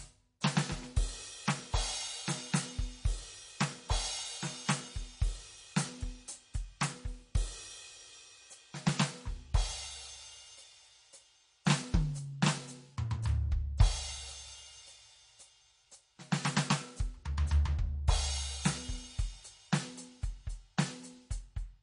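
Likely MP3 compression at a low bitrate, around 40 kbps, runs throughout the music: treble stops dead above 10.6 kHz, and starved frequency lines flicker, giving a watery, swirly sound with smeared attacks.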